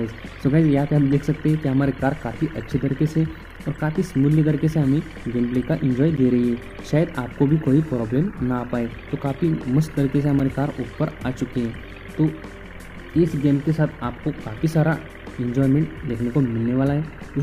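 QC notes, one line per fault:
3.56, 6.17, 10.39 and 13.92 s: block of digital silence. The sound drops to silence for 5.8 ms, or 11.6 ms at 6.17 s, then returns without a fade. These gaps are heard as short ticks. The lengths fit a 256-sample buffer, twice that once, not filled in time.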